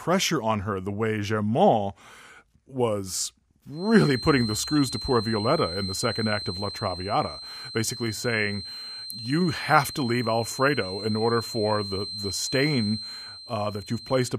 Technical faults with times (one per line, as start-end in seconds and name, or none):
3.69-14.39 feedback whistle